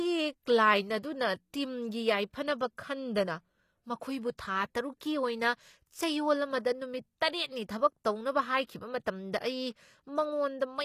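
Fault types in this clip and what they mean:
HE-AAC compression: The speech carries plainly audible codec damage throughout, with nothing above about 14.9 kHz, and the damage most likely comes from HE-AAC, where only the lower band is coded and the treble is rebuilt by spectral band replication from copied lower bands under a coarse envelope. The high end stays bright but is synthetic, so sibilants sound gritty, metallic or lispy, which fits a low bitrate around 24 kbps.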